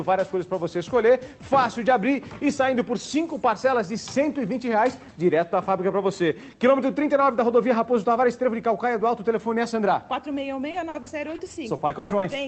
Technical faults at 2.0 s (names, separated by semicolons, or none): none